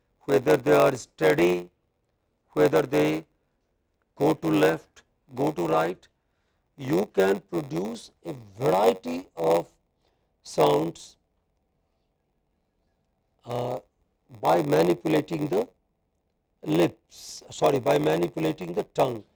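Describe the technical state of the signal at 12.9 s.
Block size mismatch (padded) at 12.9 s, and throughout: each block, which fits a 512-sample read, ends in zeros, giving a 93.8 Hz buzz and playback slowed to 0.938x.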